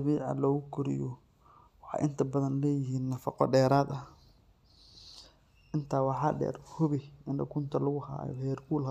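A speech recording with no technical faults to report. There is nothing here that needs a time, a value or a cause.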